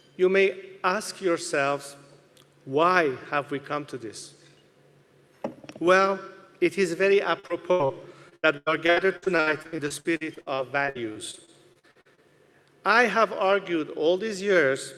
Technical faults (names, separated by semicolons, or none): repeated packet loss (robotic sound)